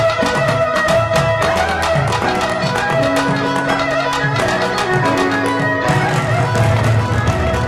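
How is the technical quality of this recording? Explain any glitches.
No glitches or dropouts can be heard anywhere here.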